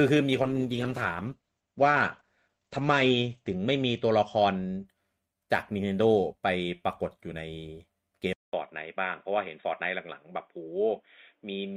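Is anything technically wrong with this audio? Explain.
Yes, there are two faults.

From 0.43 s to 4.91 s there is a call bitrate drop. The call's bandwidth estimate fell, so the encoder was told to spend far fewer bits. Coding grows coarse, and the top of the spectrum is cut. Content that reached 20 kHz now stops near 8 kHz. The sound fits a fall from around 48 kbps to 12 kbps. It is lowest for about 3.1 s. The speech turns rough and muffled until the rate recovers.

From 8.33 s to the end, the input likely switched to a poorer device. A gap of about 200 ms marks the switch. After it, nothing sounds above 3.8 kHz, so the speech turns dull and boxy. The loudness stays about the same. A faint new background noise sits far below the speech, roughly 50 dB down. That narrow band and changed tone point to a different microphone or a headset's call profile.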